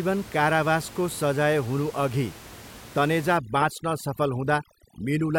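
From 3.37 s to the end, overdone noise removal kicks in: the room noise, sitting about 19 dB under the speech, gets gated into twinkly near-silence.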